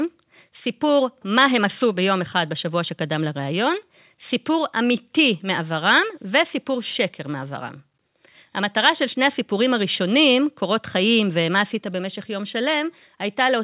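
No technical faults can be heard in the speech, which carries the ordinary character of mu-law telephone coding at 8,000 samples a second, with nothing above 4 kHz.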